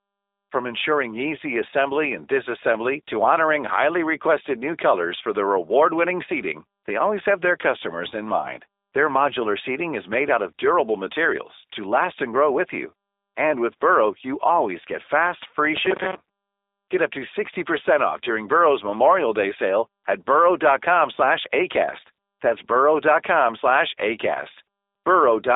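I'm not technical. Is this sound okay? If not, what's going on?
No. The whole recording has the narrow, slightly rough, artificial quality of a phone call, with no bright or crisp detail at all. That comes from the G.729 codec, a compression method used for internet phone calls. Instead of storing the actual sound, it rebuilds speech from a small set of descriptions, such as the shape of the mouth and throat and the pitch of the voice. It keeps only roughly 300 Hz to 3.7 kHz and drops everything above 3.8 kHz, so speech stays understandable but sounds flat and somewhat synthetic.

There is also a short robotic sound from repeated short buffers, from 15.77 to 16.15 s, right after "always get fast free". For that moment the voice turns into a stiff, metallic buzz at about 188 Hz. It still roughly follows the speech. The likely cause is that new audio arrived too slowly, so the playback software kept repeating the last tiny slice, about 5 ms long, to fill the gap. 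Roughly half of the original sound in that stretch was skipped, and the constant repetition produced the buzzing pitch.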